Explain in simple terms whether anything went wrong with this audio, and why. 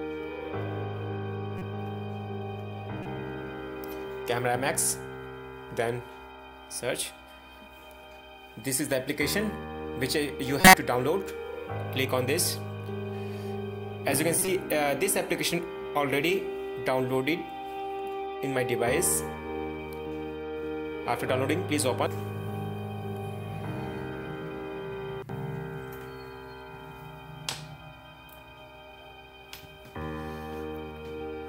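Four quick glitches at 1.58, 3.03, 10.61 and 14.39 s: corrupt frame decoded. Damaged compressed data got played anyway, so you hear brief chirps, squeaks or noise bursts.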